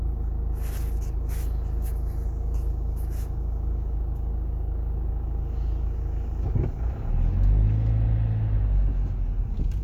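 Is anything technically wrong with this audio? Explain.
No, nothing technically wrong can be heard in this audio. There are no faults to point to anywhere in the clip.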